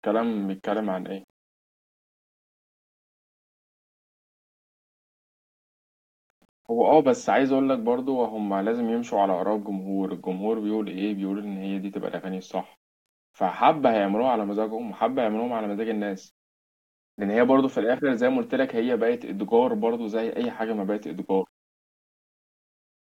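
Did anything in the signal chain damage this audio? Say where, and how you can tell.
Yes, in two places. All the way through, the speech has a grainy, gritty edge that follows the level, roughest on the quiet tails and pauses, with an error floor around 45 dB below the signal. That's low bit depth without dither, likely from a sample-format conversion step that rounded the samples to a short word, which fits about 10 bits. With no dither, the rounding error tracks the waveform, so you hear distortion rather than a smooth hiss.

At 20.44 to 20.46 s there's a single loud pop, a sharp click peaking a few dB above the speech around it, while the speech carries straight on underneath. It sounds like a step of voltage hitting the line, likely in the analogue wiring from a plug, switch or static discharge. The downstream circuitry shapes that step into a short, hard transient that sits on top of the sound rather than replacing it.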